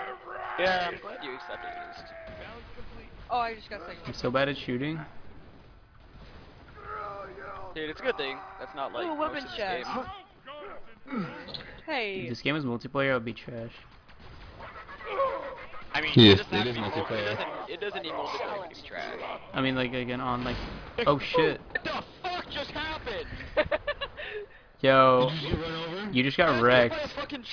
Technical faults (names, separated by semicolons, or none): none